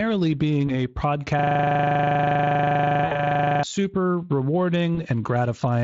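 At 0.67 s the speech briefly stretches into a buzzy tone or coloured noise that fades. This is VoIP packet loss concealed by the speech codec. About 20 ms went missing, which fits one lost frame, and the Speex decoder bridged it by extending its last pitch and filter at falling gain.

From 1.39 s to 3.63 s, right after "being a", a 40 ms fragment repeats exactly, 56 times over, giving a rough machine-gun buzz at 25 Hz. This is a system hang loop. The machine stalled while the audio hardware kept replaying one stretch of its ring buffer.

Inside that loop, from 3.05 to 3.21 s, a longer concealment fills about 60 ms (three frames) with a fading buzzy tone or coloured noise, leaving the sound weak just beyond it. A further single-frame concealment follows at 4.95 s.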